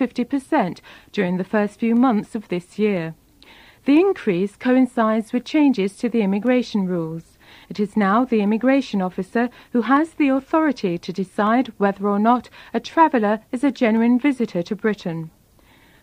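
The audio carries periodic USB or driver dropouts from 0.46 s to 15.97 s: a tick recurs every 0.5 s, around thirty in all, each where a fraction of a millisecond of sound is simply skipped as something stalls the bus or audio driver on a fixed schedule. What separates this from random crackle or an overloaded buffer is the metronomic spacing, and because a skip during silence leaves nothing to hear, the ticks appear only where there is signal.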